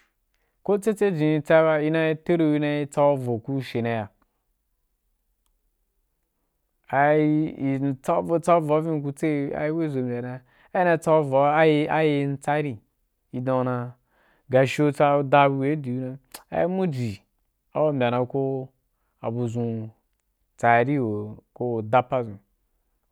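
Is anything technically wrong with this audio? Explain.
No, nothing in this speech recording stood out as a technical problem on listening.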